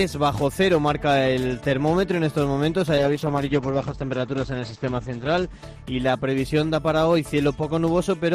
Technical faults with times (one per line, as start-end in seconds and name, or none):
2.99-8.17 call bitrate drop